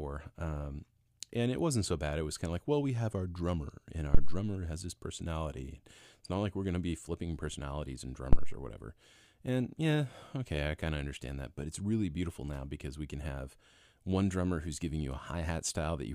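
At 4.15 s a phantom power thump lands: a deep, low-frequency thud peaking at about -10 dBFS that dies away in roughly 70 ms, with the disturbance running to 4.46 s. A second thump follows at 8.33 s, of the same depth and level, decaying in about 65 ms and ending by 8.62 s. Each is the DC step of a supply being switched on a live input, pushed through the coupling capacitors as a single low thump.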